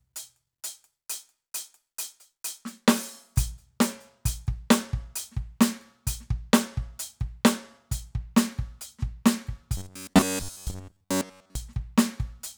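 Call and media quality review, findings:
Robotic sound from repeated short buffers, 9.77–11.55 s: music turns into a rigid metallic buzz at 93.8 Hz. Likely playback underrun, looping a roughly 10.7 ms block across most of the stretch. Unlike dropouts, no gaps. Unlike flanging, the pitch stays fixed.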